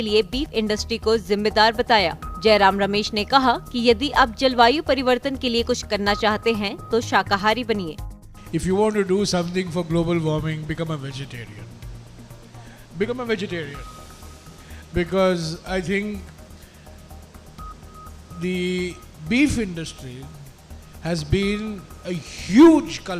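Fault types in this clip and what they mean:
Nothing stood out on listening; no faults could be heard anywhere in the clip.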